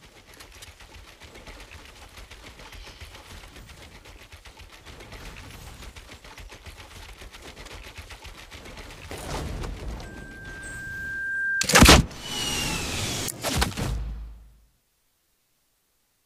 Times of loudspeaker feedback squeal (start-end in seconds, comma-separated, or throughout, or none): 10.03-11.69